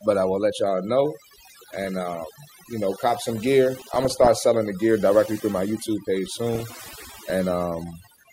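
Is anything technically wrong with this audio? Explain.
Yes. Overdone noise removal runs through the whole recording. The reducer gates individual frequency bands whenever they sit near its noise estimate, so the background collapses into near silence dotted with twinkling specks. Unlike codec damage, it is steady rather than bursty.

DAB burbling hits three spots: 1.57 to 1.87 s, after "will let y'all know"; 3.81 to 4.28 s, after "you know cop some"; and 6.55 to 7.32 s. Weak reception leaves bit errors, around half a percent, that slip past error correction into the MP2 data. Corrupted samples put short blips of noise into single sub-bands, and corrupted scale factors make sub-bands lurch in level for up to a frame, giving noise blips and level jumps that come and go in bursts, unlike the constant noise-removal artefacts.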